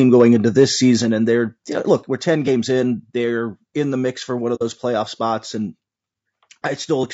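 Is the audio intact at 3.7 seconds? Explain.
No, low-delay AAC compression, likely AAC-ELD at a rate fitting about 32 kbps, runs through the whole clip: short frames blur pitch harmonics, leaving the speech rough and grainy at 3.7 s.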